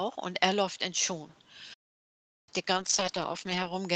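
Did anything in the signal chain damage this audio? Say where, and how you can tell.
Yes. At playback, the sound cuts out mid-flow from 1.73 to 2.49 s, roughly three quarters of a second of dead silence, then carries on. That's a playback stall, likely the player's buffer running dry or its thread getting blocked.

Over the network and codec, from 2.74 s to the end, there's a call bitrate drop. Opus falls from 32 to 10 kbps and sits at the bottom for about a second, so the coding gets coarse and the sound turns rough and muffled compared with the clean 8 kHz band before it.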